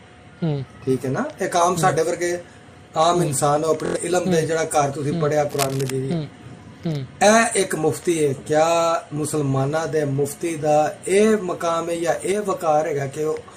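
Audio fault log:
3.86–3.97 s, Bluetooth stutter: a short slice repeats as a quick buzz while about 93 ms goes missing, which fits four lost frames, then the sound resumes further on.
5.50–5.90 s, cable scratch noise: uneven bursts of scratchy noise, roughly 10 dB under the sound, likely a worn cable or connector shifting its contact resistance.
12.32–12.42 s, one channel drops out: the level dips abruptly by about 6 dB with nothing else changing, likely one side of a matching stereo pair briefly vanishing.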